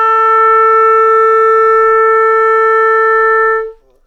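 No technical faults can be heard anywhere in this audio. Nothing in it points to a problem in recording, processing or playback.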